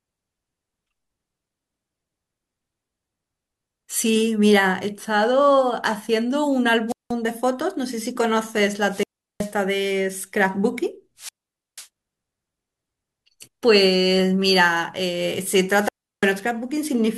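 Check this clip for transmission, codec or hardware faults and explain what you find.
The speech has four wireless microphone squelch dropouts, at 6.88–7.13 s, 8.85–9.54 s, 11.17–11.88 s and 15.76–16.35 s. In each, the RF signal from the analogue FM transmitter weakens until the receiver's squelch gate closes. The audio goes nearly silent for roughly 185 ms, 370 ms, 490 ms and 343 ms respectively. A short swell of hiss comes before each hole, and the voice comes back when the carrier recovers.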